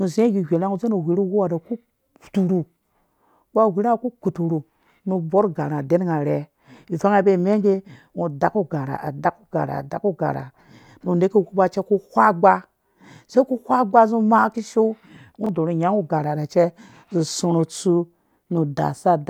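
Chunks out of order at 15.44 to 15.49 s: a 23 ms chunk of the speech arrives one chunk late and plays after the one that should follow it. Nothing is lost, but the swap creates three hard joins, heard as a brief jumbled stutter.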